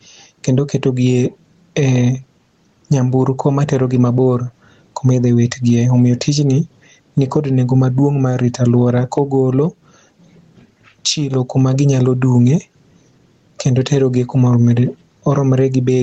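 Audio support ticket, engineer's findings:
Gain pumping throughout the speech. Around 10 dB gain swing. Likely mic gain set far too high, fast limiter clamping. Dynamics squashed. Call mic processing band-limited to 8 kHz.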